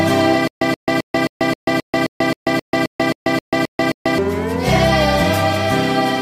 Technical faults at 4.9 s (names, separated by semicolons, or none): none